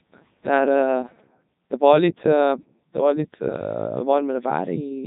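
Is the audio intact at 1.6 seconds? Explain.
No. Codec 2 vocoder coding spans the whole clip: at 3.2 kbit/s the speech is rebuilt from sine waves, sounding robotic and buzzy, with nothing above 3.8 kHz.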